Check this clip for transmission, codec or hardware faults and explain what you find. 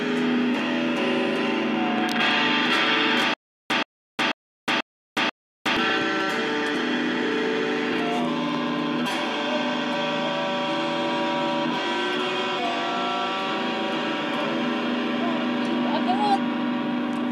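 Stutter with silent gaps, from 3.34 to 5.77 s. The likely cause is the player or stream stalling and replaying its last buffered fragment on each retry before running dry. A 127 ms burst of sound repeats five times, each followed by about 362 ms of dead digital silence, so it returns at a steady 489 ms interval. Whatever audio belonged in that stretch never plays.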